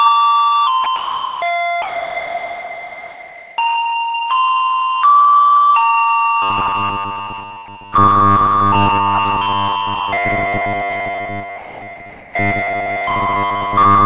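Sound dropped by the voice detector first occurs at 0.84 s, then from 0.96 to 1.42 s and from 1.82 to 3.58 s. Each time the everyday sound gives way to a flat, steady hiss, then returns. This is likely the sender's voice activity detector mistaking these non-speech sounds for background and stopping transmission, with the receiver playing comfort noise in the gap. The brief 0.84 s dropout is a 20 ms flicker, while the longest gap runs nearly two seconds.

Robotic sound from repeated short buffers sets in at 6.42 s and lasts to the end. A rigid, metallic buzz at 100 Hz settles over the audio, and most of what is heard is recycled material. New audio is likely arriving too sparsely, so playback keeps looping the last 10 ms chunk. That repetition period is what stamps the fixed 100 Hz pitch on everything, while the underlying sound is only loosely tracked.

Within that stretch, the voice detector drops the sound again from 11.58 to 11.82 s, the same hiss briefly replacing it.

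Comfort noise in place of the background follows from 12.10 to 12.34 s. The real background, about 25 dB below the louder material, is swapped for a smooth synthetic noise about 2 dB quieter and missing its natural texture. This is likely discontinuous transmission, with the sender pausing and the receiver generating a rough noise imitation. Throughout, nothing is heard above 4 kHz, which points to a G.711 telephone-band call path.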